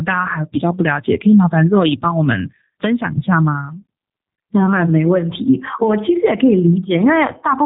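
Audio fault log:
Throughout: G.729 codec. The speech is rebuilt from a vocal tract filter, a pitch predictor and a few pulses per subframe at 8 kbit/s, so it sounds rough and buzzy rather than muffled, with nothing above 3.8 kHz. That synthetic graininess sets it apart from a simple low-pass filter.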